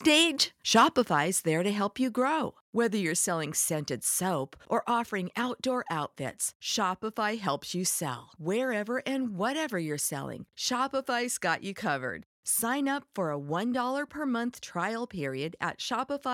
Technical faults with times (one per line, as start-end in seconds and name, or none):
0.12-0.22 microphone overload
0.75-1.00 microphone overload
1.02 microphone volume stepped down